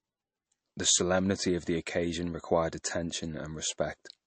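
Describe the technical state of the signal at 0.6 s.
At 0.6 s the speech carries MP3 compression damage, present across the whole clip rather than starting there. Nothing reaches above 8.3 kHz, and the sound has a watery, swirling quality with smeared consonant onsets, likely from an encoder starved of bits, consistent with a rate near 35 kbps. Weak frequency lines drop in and out between frames. A plain low-pass filter would only dull the top, without this shifting, swirly texture.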